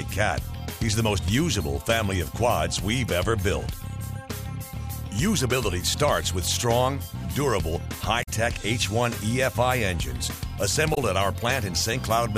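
At 8.22 to 8.29 s and again at 10.93 to 10.98 s, damaged data in the compressed stream breaks through as brief chirps or blips. Corrupted bytes make the decoder misread those frames, lose sync, and hunt for the next valid frame header before playback resumes.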